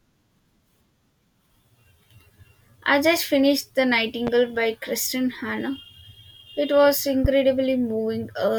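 A voltage spike, likely from a switch, plug contact or driver glitch, twice adds a sharp pulse to the signal path. Each is a loud pop. The first, from 4.27 to 4.30 s, peaks about 10 dB above the speech. The second, from 7.25 to 7.27 s, is louder, around 15 dB above. Both are single, brief thumps sitting on top of the speech, which continues uninterrupted beneath them.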